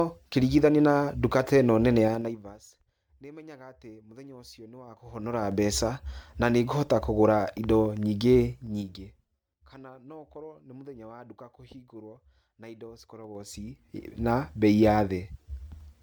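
Across the whole speech recording the sound is swirly, smeared and hollow, with softened consonant attacks. This is likely generation loss from MP3 at 128 kbit/s re-encoded about five times. On a spectrogram it shows as blotchy holes and smeared transients, with nothing above 20.1 kHz.

Zipper noise appears four times, each a run of ticking on the level as it moves in 3 dB steps with no smoothing. From 2.04 to 2.60 s, after "duka ta ĩno nene", the level falls roughly 25 dB at about fifteen steps a second. From 4.83 to 5.57 s it climbs back roughly 25 dB at about ten steps a second. From 8.45 to 9.57 s, between "ikũhota kũgũra indo nyingĩ" and "kana no", it drops again, more slowly at about seven steps a second. From 13.19 to 14.03 s, after "duka kũhingũrwo na indo", it rises about ten steps a second. The waveform envelope forms a staircase, and the spectrogram shows a faint broadband vertical line at each step.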